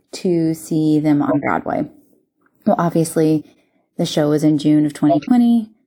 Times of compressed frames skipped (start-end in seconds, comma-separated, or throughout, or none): 3.28-3.60